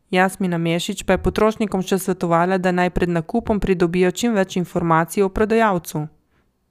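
Nothing in the speech stood out as a technical fault on listening.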